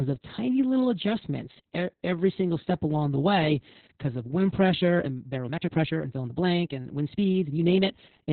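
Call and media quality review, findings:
Opus voice compression throughout: speech muffled, hoarse, slightly robotic, nothing above 4 kHz. Narrowband SILK coding with coarse excitation points to roughly 6 kbps.

Time-stretched section, 4.73 s to end: speech abruptly about 1.45x faster, rushed, pitch unchanged. Likely tempo-fitting software dropping short segments.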